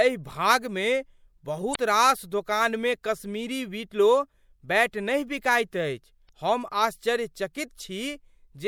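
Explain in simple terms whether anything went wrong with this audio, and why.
Two quick glitches from damaged data in a compressed stream, at 1.72–1.76 s (just before "रास दोकानमे कश्मीरी विलो") and 6.25–6.29 s: corrupted bytes make the decoder briefly lose its place.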